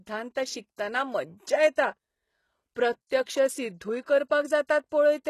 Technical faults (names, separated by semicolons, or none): HE-AAC compression